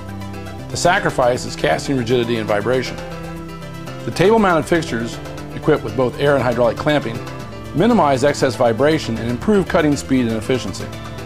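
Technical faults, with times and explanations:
No technical faults can be heard anywhere in this clip.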